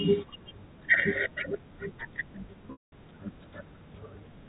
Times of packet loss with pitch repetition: 2.72-2.92

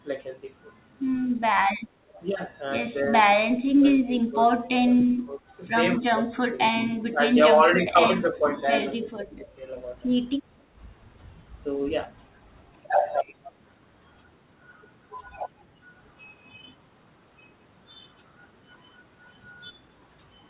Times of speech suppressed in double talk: 3.03-3.13, 3.77-4.41, 4.77-5.57, 6.00-8.52, 8.99-9.60

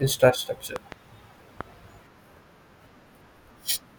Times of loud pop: 0.76-0.94, 1.61-1.63

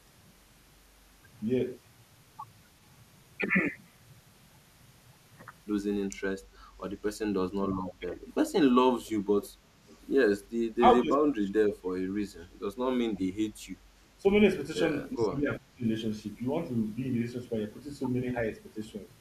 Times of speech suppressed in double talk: 7.81-8.17, 9.39-9.75, 10.78-13.30, 14.20-14.25, 15.14-15.85

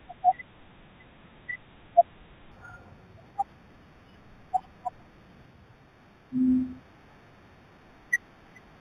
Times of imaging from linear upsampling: 2.52-8.80

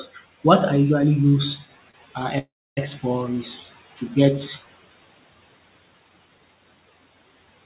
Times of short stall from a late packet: 1.29-1.35, 1.91-1.96

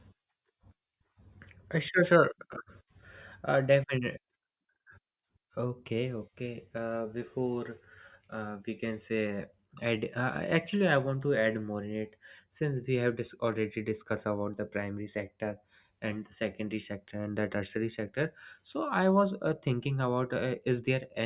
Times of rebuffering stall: none

